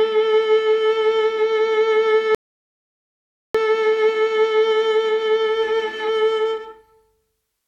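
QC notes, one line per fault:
2.35–3.55 s rebuffering stall: the music halts into silence for about 1.2 s, then resumes exactly where it stopped, with nothing skipped, unlike a dropout that loses material.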